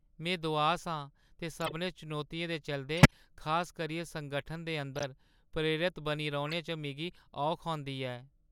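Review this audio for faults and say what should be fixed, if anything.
Short chirps and bursts of noise cut across the speech at 1.61–1.73 s, 2.97–3.13 s (loudest, peaking near -10 dBFS), 4.96–5.04 s and 6.49–6.53 s. This is a corrupt frame decoded: damaged compressed frames were played anyway, scattering energy to wrong frequencies for two to seven frames each time. Add checksum or error detection so damaged frames are concealed or dropped instead of decoded.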